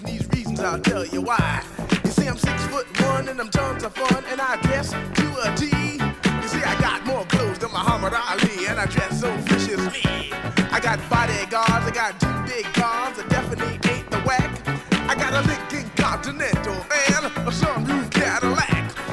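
Nothing in this recording stands out as a technical fault; it all comes across steady and undisturbed.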